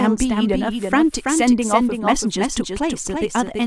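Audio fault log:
throughout, doubled audio track: a second, full-band copy of the speech runs about 300 ms behind the original, roughly 5 dB quieter, so every syllable is followed by a distinct, dry repeat with no decay or room colour of its own. Because the gap and level stay fixed across the whole clip, it sounds like a steady slapback rather than reverberation, most likely from the same signal being captured again through a slower path and mixed back in.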